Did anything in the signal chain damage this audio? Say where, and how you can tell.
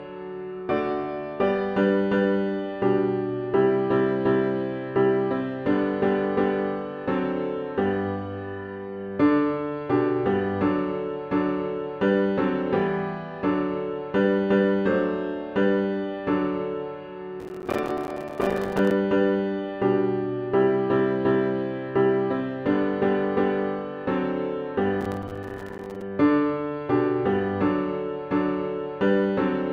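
Yes, processor overload crackle in the driver buffer, 17.40–18.91 s and 25.01–26.02 s: gritty bursts of tiny silent gaps, fitting missed 5 ms buffers.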